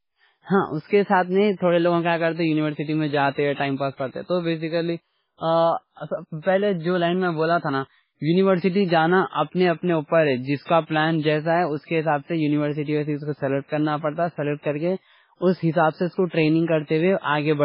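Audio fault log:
Throughout: MP3 compression. The speech has nothing above about 5.3 kHz, so sibilants and breath lose their top and the whole clip sounds dull and band-limited. Beneath that ceiling the sound has a watery, swirling quality: weak spectral components drop in and out from frame to frame, leaving a warbling residue around consonants. Damage this heavy is likely from an MP3 encoder starved of bits, which fits a very low bitrate of around 16 kbps.
10.63 to 10.68 s: pre-echo. A hiss runs for about 59 ms immediately before the onset of "کا پلان جیسا ہے", and that onset is softened rather than crisp. The codec spreads quantisation noise across an entire transform block. Here the loud attack lands late in the block, so noise scaled to the attack also fills the near-silent stretch ahead of it. That noise is audible as a brief smear arriving before the sound itself.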